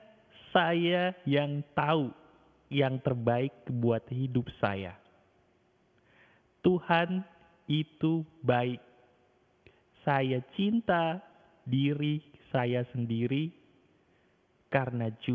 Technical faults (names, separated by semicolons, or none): clock drift between sender and receiver; repeated timing corrections